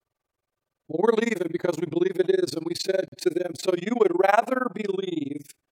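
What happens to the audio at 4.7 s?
At 4.7 s the speech carries overlap-add ripple, present across the whole clip: windowed frames rejoin with an overlap that doesn't sum evenly, so level dips by about 60 dB roughly twenty times a second. Unlike packet dropouts, this fast flutter never stops.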